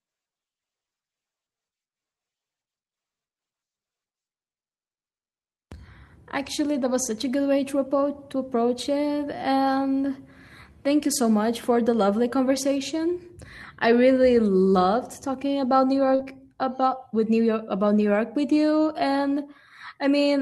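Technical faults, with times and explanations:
16.15–16.21 s, short concealed packet loss: just before "about with", roughly 40 ms of audio failed to arrive in time and the receiver extrapolated the preceding sound to cover it, giving a brief smeared wobble.
16.19–16.21 s, lost packet rebuilt from error correction: the closing 20 ms, consistent with one lost packet, was recovered from a low-bitrate backup copy carried in the following packet, so no gap opens, but it sounds rougher and noisier. A spectrogram shows grainier, less defined detail there.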